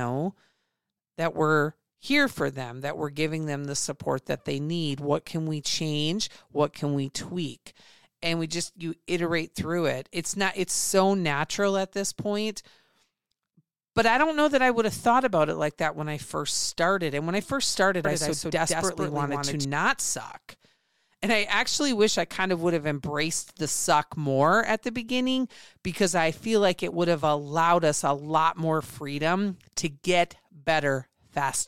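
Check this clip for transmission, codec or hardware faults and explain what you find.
One fault turns up in this speech clip: a doubled audio track. It starts at 18.05 s, just after "when I first started", and runs to 19.65 s. A second copy of the speech sits about 150 ms behind the first, some 5 dB quieter. The likely cause is a second, slower capture path feeding the same mix. The copy is full-band, with no decay or room colour, so it sounds like a flat slapback echo. It switches on and off abruptly.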